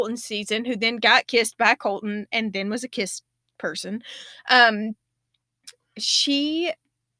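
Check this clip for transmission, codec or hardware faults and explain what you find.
No transmission, codec or hardware faults turn up anywhere in this speech recording.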